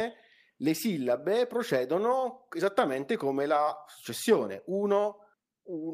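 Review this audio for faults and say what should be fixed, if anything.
No faults; nothing to fix.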